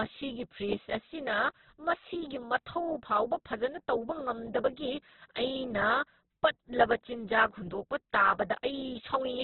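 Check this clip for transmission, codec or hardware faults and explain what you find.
The whole recording carries one codec fault, heavy likely Opus compression. From start to finish, nothing is present above 4.2 kHz, so the speech sits in a narrowband channel and sounds muffled and boxy. The encoder keeps each band's overall energy but, short of bits, fills the detail by copying lower bands or injecting noise. The speech therefore turns grainy and rough. That degree of damage points to a very low bitrate, around 8 kbps.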